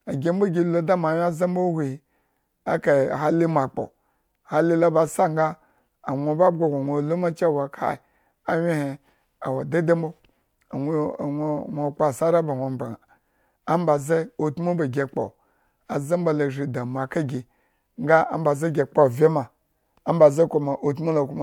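Nothing here calls for comment, as the speech runs along without a single technical fault to point at.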